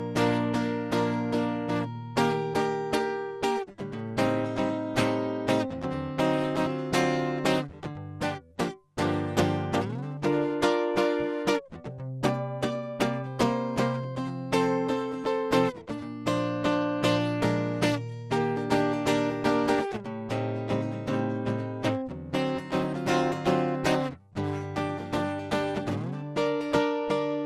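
Throughout the music, the sound has a swirly, hollow, smeared quality, with attacks blurred and a watery instability in sustained tones. This is generation loss, likely from repeated lossy re-encoding, with the character pointing to an MP2 chain at around 96 kbit/s passed through roughly seven times. Each pass requantised the audio on a shifted frame grid, so noise accumulated. On a spectrogram, nothing appears above 15.7 kHz.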